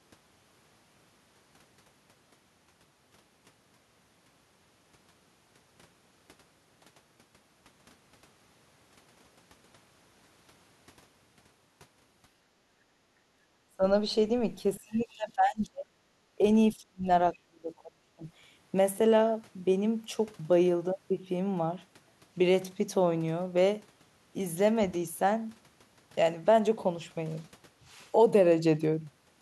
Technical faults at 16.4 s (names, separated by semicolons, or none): speech suppressed in double talk